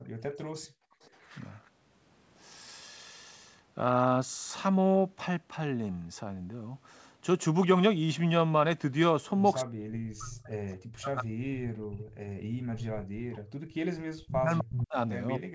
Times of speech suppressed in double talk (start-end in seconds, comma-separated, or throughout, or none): 0.00-0.75, 9.64-11.80, 12.51-15.55